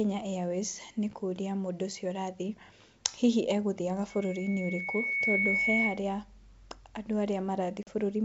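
From 4.09 to 6.03 s, just after "hihi egũthiaga", a loudspeaker feedback squeal sets in: the microphone re-captures its own loudspeaker, and a 2.2 kHz tone swells over about a second to roughly 5 dB above the speech. At 7.83 s, packet loss on the ADPCM call drops about 40 ms into a hard-edged silence, and the decoder's predictor falls out of step before the speech resumes at 7.90 s.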